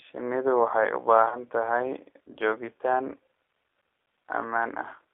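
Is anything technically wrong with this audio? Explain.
Yes, there are two problems. Throughout the speech the sound carries G.729 codec damage. This low-rate coder rebuilds each short frame from a vocal tract filter, a pitch predictor and a few pulses, and the rough, slightly synthetic texture here fits an 8 kbit/s G.729A link. The audio is confined to about 300 Hz to 3.5 kHz. On a spectrogram, energy stops sharply near 3.5 kHz with nothing above. Harmonics look smeared and grainy rather than cleanly striated.

From about 1.29 to 1.41 s there is VoIP packet loss concealed by the speech codec. Roughly 30 ms of audio went missing, which fits a single lost packet. The decoder filled the gap by repeating its last pitch and filter settings at falling gain. The speech briefly turns into a stretched, buzzy tone or coloured noise that fades, and stays weak or distorted as it recovers. The waveform shows the stretched sound shrinking in amplitude, and the spectrogram shows it unchanging there.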